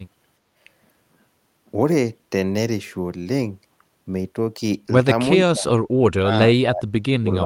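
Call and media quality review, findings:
Speech suppressed in double talk. The echo canceller likely treated the near-end talker as loudspeaker echo while both ends spoke, and attenuated everything. Speech level drops sharply at 5.40–5.73 s (about 25 dB, roughly 0.3 s), 6.18–6.36 s (about 30 dB, roughly 0.2 s), and from 6.57 s to the end of the clip (down by up to about 40 dB).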